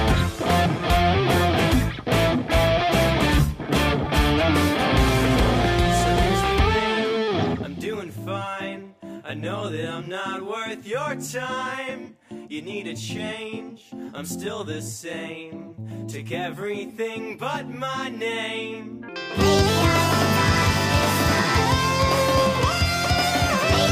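At 19.08 s and running right to the end, the audio jumps up in speed and pitch together. That's a wrong sample rate fault: the samples get played faster than they were captured, with no conversion in between. Everything runs 1.5 times as fast and sits about 7 semitones higher, a musical fifth, so it sounds bright and rushed. That 1.5 ratio fits 32 kHz material being played back at 48 kHz.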